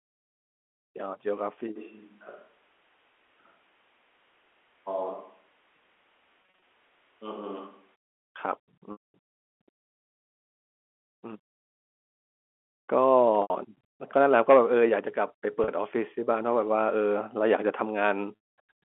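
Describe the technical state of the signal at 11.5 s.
At 11.5 s the audio is intact, with no fault to be heard, only the narrow telephone band of G.711 coding limiting the speech to roughly 250 Hz to 3.4 kHz.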